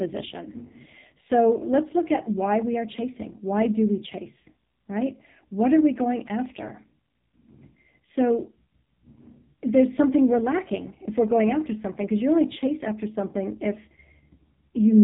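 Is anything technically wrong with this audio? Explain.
Yes. Throughout the speech, the sound carries the marks of the AMR narrowband mobile codec, heavily damaged. The codec rebuilds speech from a vocal-tract model excited by a few pulses per 5 ms subframe, and the degree of buzzy, synthetic coarseness fits one of its lowest modes, around 5 kbps. Nothing survives above 3.8 kHz, so sibilants lose their hiss and everything sounds boxed-in. On a spectrogram, energy stops at a flat ceiling near 3.8 kHz, with smeared, blocky harmonics below it.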